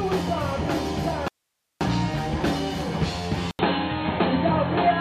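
At 1.28 s the sound cuts out abruptly and returns at 1.81 s, a gap of about 0.53 s. This is likely an audio dropout to a faint residue. The wanted signal is lost, but the path stays live, so only a thin bed of hiss remains, roughly 55 dB below the signal. On the waveform the envelope collapses to a near-flat line. On the spectrogram the gap shows as a hard-edged band of faint, uniform noise.

At 3.51 s there is a silence of about 80 ms. The sound then resumes duller and boxier through to the end. This is likely an input switched to a poorer device. Nothing above 4.2 kHz survives, and a new noise floor sits around 50 dB below the signal, while the loudness stays about the same. The spectrogram shows a short vertical blank, then a sharp ceiling at 4.2 kHz. The waveform keeps a similar amplitude.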